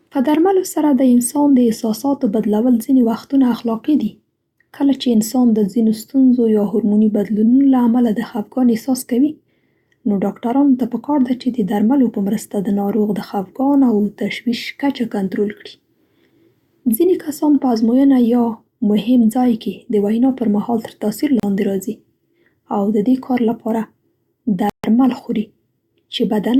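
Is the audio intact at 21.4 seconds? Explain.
No. A Bluetooth stall likely struck here: interference delayed packets on the wireless link, so the headphones' playback buffer ran empty and output halted until the resent data arrived. The speech cuts to silence for 35 ms, from 21.40 to 21.43 s, before continuing.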